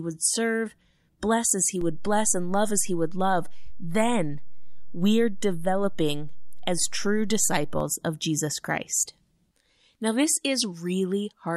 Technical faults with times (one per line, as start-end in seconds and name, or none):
1.81-7.80 DC step